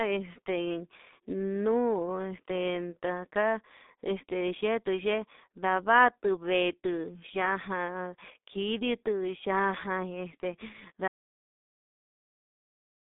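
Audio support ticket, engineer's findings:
Whole clip: G.723.1 codec damage, heavy. Speech muffled, hoarse, consonants smeared; nothing above about 3.8 kHz, band roughly 200 Hz to 3.7 kHz. Sounds like around 6.3 kbit/s coding on 30 ms frames, voice model lagging behind fast changes in the speech. Typical old VoIP leg.

11.08 s to end: audio dropout to silence. Speech cuts off mid-flow into dead silence, no room tone. Likely an input loss upstream, such as a dropped link, disconnected device or mute, with the encoder still writing frames.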